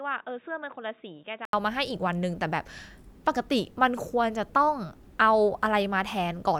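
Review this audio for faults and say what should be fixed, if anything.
From 0.0 to 1.53 s the speech is dull and about 10 dB quieter, likely because the input switched to a poorer device. The spectrogram shows nothing above 3.8 kHz until an 80 ms waveform gap, after which full-band sound returns. Lock the recording input to one device so the system cannot change microphones mid-recording.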